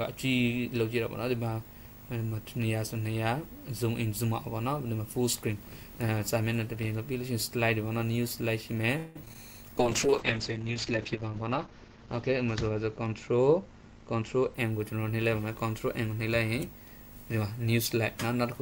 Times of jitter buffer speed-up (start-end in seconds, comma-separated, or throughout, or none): 13.34-14.79